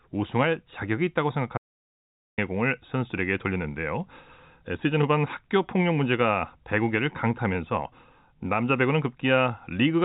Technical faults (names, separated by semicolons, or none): audio dropout to silence